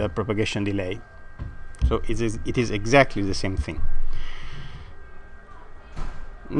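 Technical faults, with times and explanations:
Nothing stood out as a technical problem on listening.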